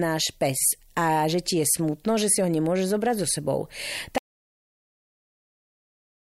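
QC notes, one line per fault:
4.18 s to end: audio dropout to silence. The speech cuts off mid-flow and the remaining two seconds are silent, with no room tone underneath, which points to the input being lost, likely a disconnected device or failed link, while recording continued.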